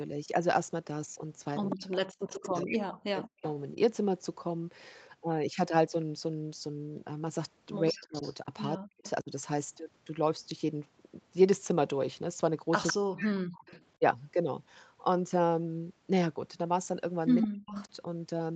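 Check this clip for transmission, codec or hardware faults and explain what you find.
Two related call faults recur four times, each time the far side talks over the near-end talker: echo leaking back and the talker's speech being suppressed.

Echo leak, at 1.7–3.5 s, 8.12–9.1 s, 12.87–13.84 s and 17.42–17.85 s: the far end is likely on a loudspeaker whose echo canceller let part of the returning signal through. A copy of the speech trails the original by 162 ms, sitting roughly 10 dB down, nearer 15 dB at 8.12 s and only about 5 dB down at 12.87 s, where it is most obvious.

Speech suppressed in double talk, at 1.76–3.76 s, 7.9–9.31 s, 12.92–14.02 s and 17.43–17.75 s: with both sides active, the canceller likely couldn't tell the talker from its own echo and clamped down on both. The speech drops sharply, by as much as 40 dB at the deepest points, in choppy gaps totalling about one and a half seconds in the first stretch, under a second in the next two, and a brief dip near the end. 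Throughout, the top end stops at 8 kHz, which fits the Opus call path at around 24 kbps.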